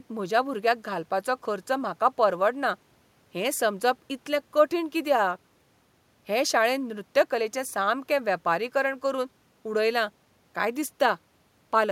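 The speech signal shows no technical faults, with only the room's own background noise audible at about 41 dB below the speech.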